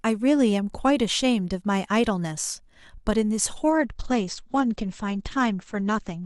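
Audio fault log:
3.70–6.25 s, adaptive stream at a lower bitrate: with no gap, the speech abruptly loses everything above 8.5 kHz and codec artefacts thicken. That fits the player dropping from about 64 kbit/s Opus to around 12 kbit/s when the connection slowed.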